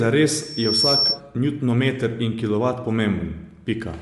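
Bluetooth LC3 compression, throughout the 4-second speech: nothing is heard above 11.6 kHz, and the upper band has a plainly grainy, breathy texture. The likely cause is an LC3 transform codec refilling discarded high bands with noise, which fits roughly 48 kbps with 10 ms frames.

Loudspeaker feedback squeal, 0.38 to 1.21 s: a 5.4 kHz tone swells over roughly 0.4 s to a few dB above the speech, as microphone-to-loudspeaker gain exceeds unity there. It stops just before "njutonmeter in kilovat".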